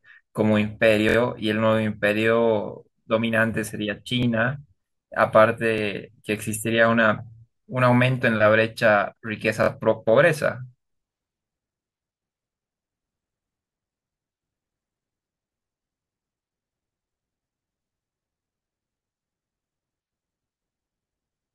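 At 1.09, 4.23, 5.78 and 9.64 s the speech stutters with a repeated buffer. Audio arrived late, so the device replayed its last 23 ms block three, one, one and two extra times, which fits a 1024-sample buffer. The waveform shows identical tiled segments, and the spectrogram shows vertical seam lines at the hard joins.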